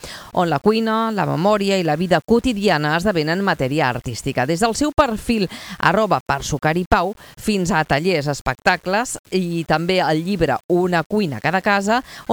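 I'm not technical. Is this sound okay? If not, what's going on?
Yes, this one's fine: nothing in it sounds broken or off, so there's nothing you need to worry about.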